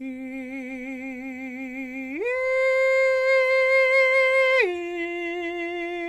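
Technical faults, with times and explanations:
No technical faults are heard in this music clip.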